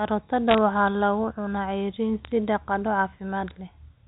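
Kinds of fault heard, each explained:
Bit errors on a digital phone line: at 0.48–0.58 s and 2.25–2.32 s, brief crackly ticks sit over the telephone speech. Each flipped bit corrupts one mu-law sample, and hits on sign or high bits make the waveform jump, at a rate well under one percent.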